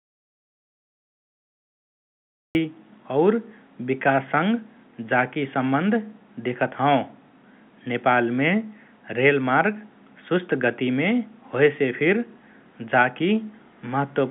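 Audio dropout to silence runs from 0.0 to 2.55 s in this speech recording, already under way as it opens: pure silence, no room tone, likely from lost input while writing continued. The speech that follows carries G.711 telephone coding, band-limited to roughly 150 Hz to 3.5 kHz.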